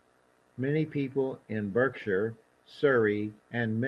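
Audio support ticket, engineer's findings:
Lost packet rebuilt from error correction, 2.91–3.01 s. No gap; the speech turns briefly rougher and noisier. Consistent with three separate lost packets, about 60 ms in total, concealed by the decoder using the low-bitrate redundant copies carried in the following packets (Opus in-band FEC). Surrounding audio through the Opus call path, bandwidth limited to 12 kHz.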